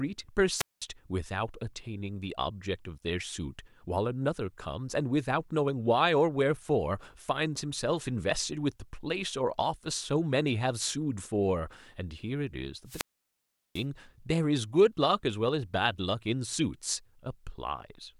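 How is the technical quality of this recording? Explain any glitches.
Two wireless microphone squelch dropouts interrupt the speech, at 0.56–0.83 s and 12.85–13.86 s. In each, the radio link from the FM transmitter weakens, the receiver's squelch closes, and the output is muted. You hear a short rise of hiss or static, then a hole of near silence before the voice returns. The first mute lasts about 203 ms. The second is much longer, about 745 ms.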